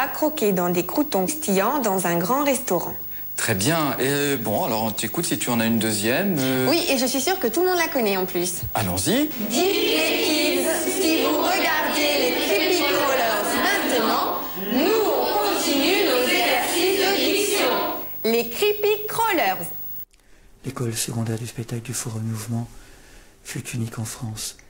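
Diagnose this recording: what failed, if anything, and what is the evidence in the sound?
Periodic clock jitter from 20.16 s to 24.53 s, at the converter stage. In that span the sound gains a rough, metallic edge that drops away whenever the signal falls silent. Interference is modulating the converter's sample clock at a steady rate of around 1 kHz, so each component of the sound is flanked by sidebands spaced about 1 kHz above and below it. High-frequency content shows the effect most strongly.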